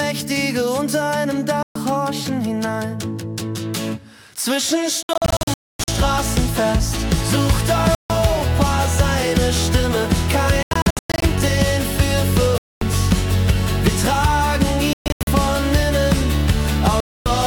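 Silent gaps break the sound at 1.63–1.76 s, 5.03–5.88 s, 7.95–8.10 s, 10.63–11.23 s, 12.58–12.82 s, 14.93–15.27 s and 17.00–17.26 s. The 5.03 s, 10.63 s and 14.93 s events are clusters of short holes, the longest 0.26 s. After each gap the sound resumes further along, as if it had kept playing. This is most likely Bluetooth dropout, where packets reached the headphones too late and were discarded.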